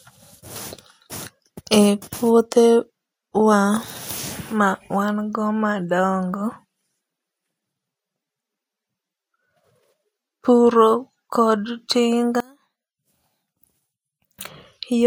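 In this speech recording, from 12.40 s to 14.39 s the voice suddenly collapses to a faint remnant, dropping by about 26 dB before returning to full level. Such a sharp loss of centred voice points to one channel inverted, likely one stereo side flipped in polarity. When the two sides are summed to mono, the nearly identical voice cancels out. Only their small differences survive as a faint copy.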